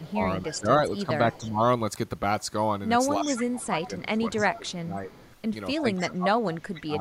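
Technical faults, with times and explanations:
0.0–0.59 s, 1.32–1.5 s and 3.23–6.07 s, echo leak: a faint copy of the speech trails the direct sound by about 304 ms, sitting roughly 15 to 25 dB down and loudest in the long final stretch. Likely a far-end loudspeaker echo the canceller did not fully remove. On a spectrogram the harmonic pattern reappears, dimmer, about 0.3 s later. The waveform shows low ghost bursts filling the gaps between syllables.
0.02–1.6 s, 3.18–5.11 s and 5.81–7.0 s, speech suppressed in double talk: the speech dips in pieces, about 0.7 s of the first span, 1.5 s of the second and 1 s of the last. The drops reach around 15 dB, and around 30 dB at the end. This is likely the canceller muting the talker while echo overlaps. On a spectrogram, energy and high frequencies fade in patches. The waveform envelope shows sudden hollows.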